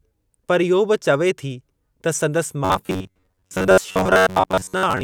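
From 2.65 s, just after "त संदसि", to 5.04 s, the speech becomes a robotic sound from repeated short buffers: a rigid metallic buzz near 94 Hz, likely caused by looping roughly 10.7 ms snippets for most of that stretch. A spectrogram shows fixed, evenly spaced harmonic lines, and the waveform repeats almost identically.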